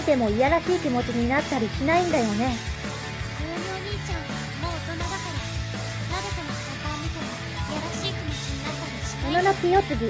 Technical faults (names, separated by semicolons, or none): none